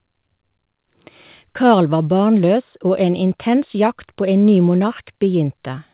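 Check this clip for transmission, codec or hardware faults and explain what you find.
No faults found in this clip.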